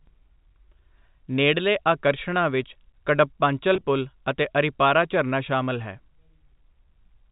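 A speech recording over what sounds like G.711 telephone coding, with nothing above 4 kHz, has a burst of packet loss with pitch repetition between 3.74 and 3.86 s. About 70 ms is lost in short runs of at most 20 ms scattered across 120 ms, which fits roughly seven 10 ms packets. Each gap is filled by repeating the last pitch period, so instead of silent holes or clicks, as in a plain dropout, the sound briefly turns held and buzzy before resuming.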